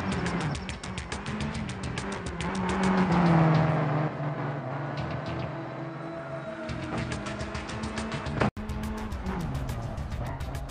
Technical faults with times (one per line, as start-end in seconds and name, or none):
0.00-8.57 input switched to a poorer device